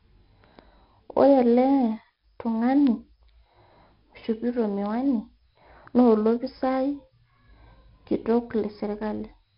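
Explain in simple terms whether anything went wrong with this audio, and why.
The speech was stored with 4-bit ADPCM compression, which keeps each sample only as a coarse step away from a guess of where the sound should go. That rough rounding adds a gritty hiss that rises and falls with the voice across the whole clip, and sharp consonants come out harsh and distorted. Nothing is left above about 5.3 kHz, which points to a low sample rate and makes the voice sound dull and muffled.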